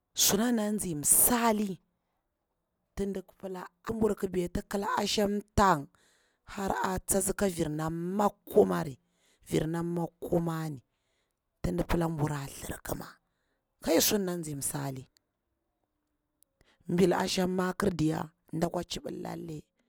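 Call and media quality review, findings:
Sudden gain jump at 18.65 s, lasting to end. Speech and noise floor drop together by about 8 dB. Likely an unramped digital gain change.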